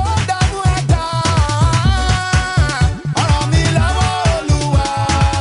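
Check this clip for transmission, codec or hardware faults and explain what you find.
No faults detected.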